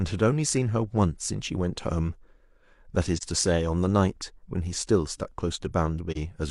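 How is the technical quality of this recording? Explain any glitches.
The speech has two brief dropouts. Both are AAC frame loss with muting, at 3.17–3.23 s and 6.11–6.17 s. Each fits about 43 ms of zeroed spectrum, one lost frame, faded by overlapping windows into brief dips.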